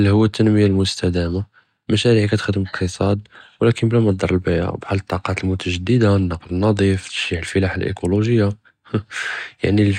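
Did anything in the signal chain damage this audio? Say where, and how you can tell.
No, nothing in the chain, from capture through to playback, has left a mark on this speech that can be heard or pinned to a stage.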